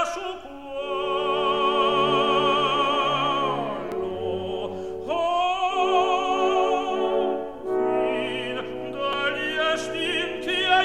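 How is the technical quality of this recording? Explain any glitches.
Two brief glitches at 3.92 s and 9.13 s, both from damaged data in a compressed stream. Corrupted bytes make the decoder misread the frame and lose sync, then hunt for the next valid frame header. Each is heard as a short chirp or blip.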